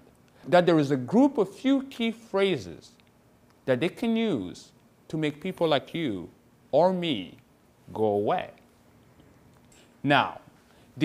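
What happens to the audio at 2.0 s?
Nothing goes wrong at 2.0 s; the audio plays through that moment intact, with no dropout, click or distortion to be heard.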